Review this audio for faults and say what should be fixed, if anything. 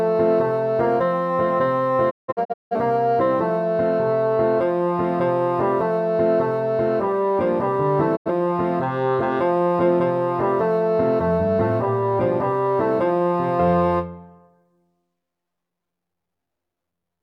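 Digital broadcast dropout occurs at 2.09–2.75 s as scattered silent holes totalling 0.43 s (longest 0.17 s), and at 8.15–8.31 s as one 85 ms hole. The receiver muted on failed frames, leaving 20 ms fades into blank vertical spectrogram bands and flat waveform gaps. Stronger reception or error protection prevents this.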